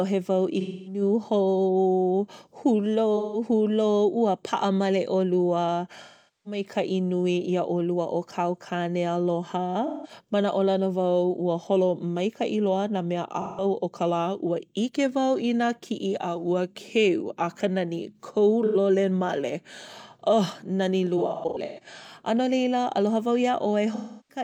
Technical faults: AAC frame loss with concealment

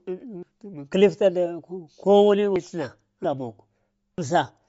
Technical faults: Bluetooth LC3 compression; dropped buffer (overrun)

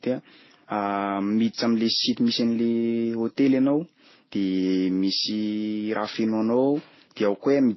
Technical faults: transcoding between lossy codecs

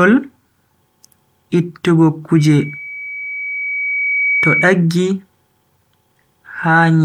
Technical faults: loudspeaker feedback squeal

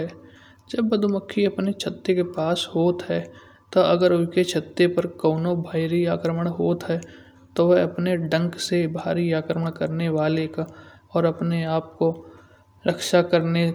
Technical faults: none

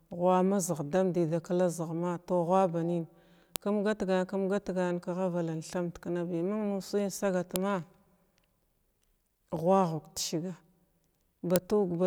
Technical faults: file header played as audio

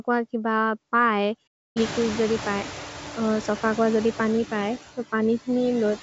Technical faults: noise suppressor artifacts; playback stall

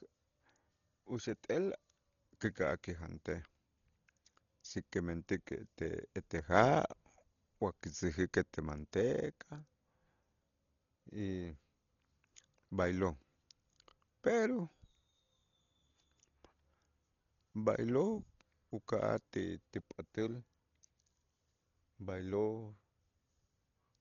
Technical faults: Dolby Digital compression

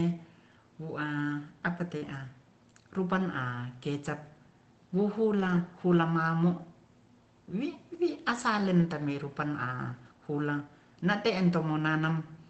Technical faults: short concealed packet loss; lost packet rebuilt from error correction

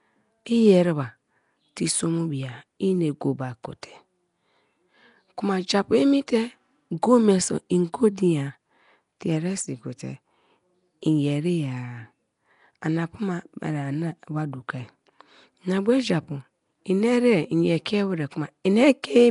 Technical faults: Nellymoser compression

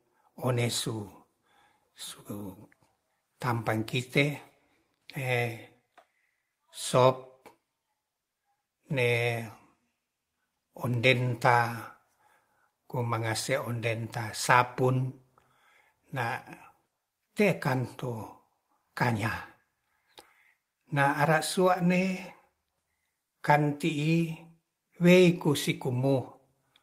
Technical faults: none

